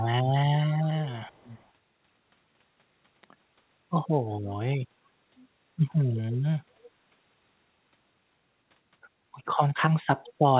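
Echo leak at 1.27–1.7 s, 6.15–6.21 s, 6.79–6.9 s and 10.25–10.33 s: faint copies of the speech return 337 ms late, roughly 20 to 30 dB down, likely leftovers an echo canceller missed.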